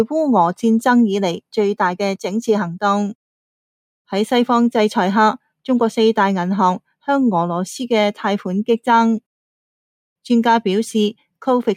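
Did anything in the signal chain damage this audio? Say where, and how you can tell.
No, nothing in the signal chain damaged this audio.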